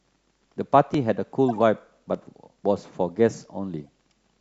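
Dropped samples at 0.94 s and 2.15 s are sharp single clicks in the speech, likely from roughly a millisecond of samples missing, so the waveform jumps abruptly. A corrupt frame decoded from 1.49 to 1.59 s gives a chirp, blip or burst of noise peaking around -20 dBFS, as damaged compressed frames were played with misread codes. Another, from 3.84 to 3.88 s, is much fainter, near -50 dBFS.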